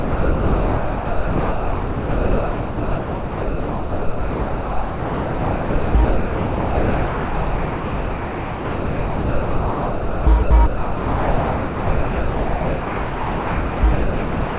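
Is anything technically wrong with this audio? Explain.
Yes. Almost the whole clip is steady noise in place of the actual sound, from 0.0 to 5.95 s, 6.05 to 10.27 s, 10.43 to 10.51 s, 10.67 to 13.83 s, and 13.93 s to the end. Only slivers of the real sound, each about 0.1 to 0.16 s, break through between them. This is most likely sound dropped by the voice detector. The sender judged the sound to be background and stopped transmitting, and the receiver filled the gaps with comfort noise. Nothing in the clip reaches above 4 kHz, which fits a narrowband call codec such as G.711.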